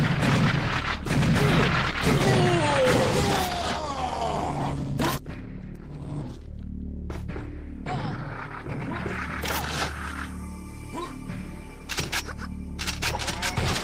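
Nothing in the signal points to a technical fault at any point in the audio.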